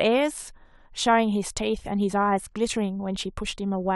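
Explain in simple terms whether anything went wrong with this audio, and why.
Nothing went wrong here.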